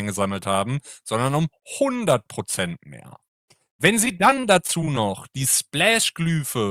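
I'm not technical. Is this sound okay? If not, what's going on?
No. From about 4.05 to 4.97 s there is repeated packet loss (robotic sound): ten short gaps in a row, none longer than about 23 ms, each patched by stretching the previous sound. That sounds choppy, with pieces missing, unlike one single clean dropout.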